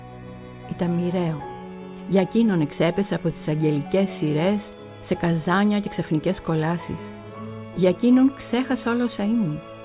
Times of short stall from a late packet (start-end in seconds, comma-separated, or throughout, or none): none